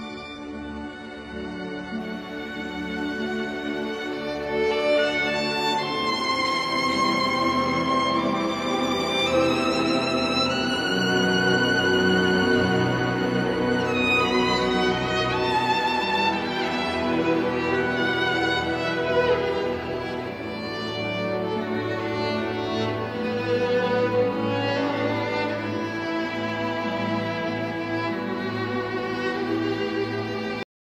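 For the first 2.0 s the audio plays as an adaptive stream starting at a low bitrate. Nothing sounds above about 10.9 kHz, and the thin, smeared texture points to a roughly 12 kbit/s HE-AAC rendition. The quality then steps up at once, fitting a switch to an AAC-LC stream near 96 kbit/s, with no gap or stall, unlike a rebuffer. At 30.63 s there is a cut-off end: the sound stops mid-event and drops straight to digital silence, with no decay or fade, because the final buffers were never written or played.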